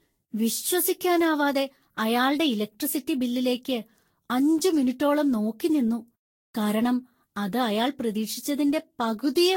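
The speech was likely re-encoded around ten times with a lossy codec, each pass landing on a fresh frame grid, so generation loss runs throughout. The result is swirly, hollow and smeared beyond what a roughly 60 kbit/s Vorbis-like rate suggests, consonant attacks blur, and nothing remains above 16.6 kHz.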